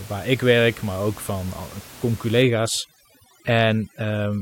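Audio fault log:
2.42–4.41 s, overdone noise removal: from 2.42 s to the end, a noise reduction stage set too hard pulls frequency bands lying near its noise estimate far down or out. The room noise, which sits about 20 dB below the speech, breaks into twinkling, warbling specks, and quiet parts of the voice are removed with it. A spectrogram shows the background changing from an even wash to scattered, isolated time-frequency dots, with holes cut into the weaker speech harmonics.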